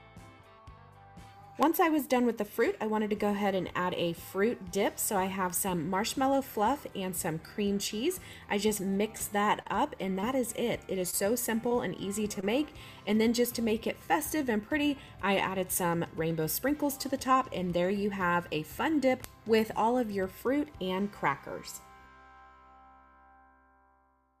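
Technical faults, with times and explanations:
9.17–12.72 s, scattered short gaps: about seven small holes lose 100 ms of audio, none much over 30 ms. The receiver stretched the last sound over each, leaving brief ticks and smears.
14.50–15.07 s, jitter buffer speed-up: surplus buffered audio was cut as short pitch-period slices, about 50 ms in all. The sound runs 6% fast at unchanged pitch and feels hurried.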